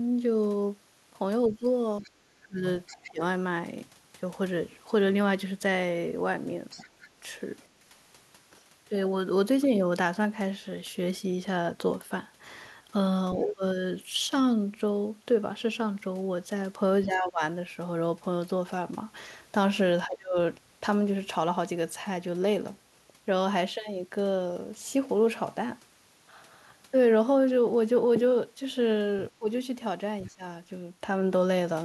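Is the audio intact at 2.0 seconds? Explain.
No. From 1.47 to 3.21 s, speech is suppressed in double talk, likely because the echo canceller confused both talkers and ducked everything. The voice dips by up to about 25 dB, unlike a dropout's clean silence. Starting at 2.03 s, the other side's voice leaks through faintly, around 20 dB below the speech, likely as uncancelled loudspeaker echo, heard as a separate voice rather than a delayed repeat of the talker.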